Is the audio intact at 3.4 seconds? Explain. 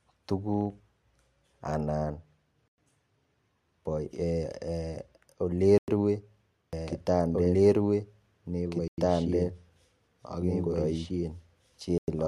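Yes, the audio is intact at 3.4 seconds, with no fault audible at that moment.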